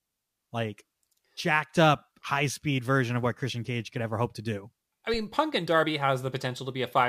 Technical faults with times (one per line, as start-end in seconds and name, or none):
5.14-5.30 phantom power thump